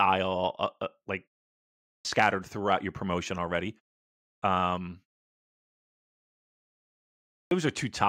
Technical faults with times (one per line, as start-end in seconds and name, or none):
2.01-2.05 clipped start after a pause
4.38-4.42 clipped start after a pause
7.47-7.51 clipped start after a pause